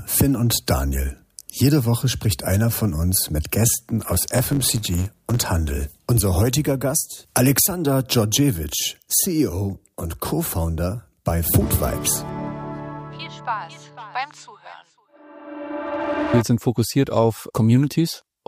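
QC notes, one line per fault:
3.98–5.45 s: block size mismatch (truncated). The end of every block is discarded, which fits 512-sample writes read short, giving a 91.9 Hz buzz and audio running 1.07 times fast at near-normal pitch. The waveform shows regular splice jumps, and the spectrogram shows evenly spaced vertical striations.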